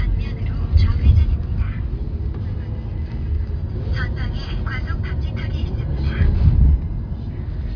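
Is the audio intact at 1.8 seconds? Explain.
Yes, the audio is intact at 1.8 seconds, with no fault present at that moment.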